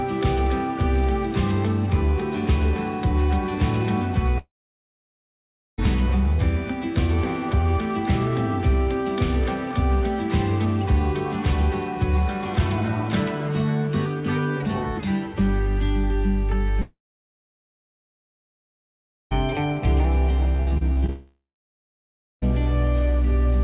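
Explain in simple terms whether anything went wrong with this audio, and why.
Yes, the sound cuts out three times, most likely from a long network dropout: at 4.38 to 5.80 s, 16.82 to 19.33 s, and 21.10 to 22.44 s. Each time, a brief fading buzz gives way to silence, and the sound returns with that stretch lost.

Just before the last cut-out, from 20.57 to 21.10 s, there is repeated packet loss, which gives a choppy, robotic sound. Seven tiny holes, the longest about 39 ms, are patched over, about a third of that half-second. Unlike a dropout, the sound stutters rather than going quiet.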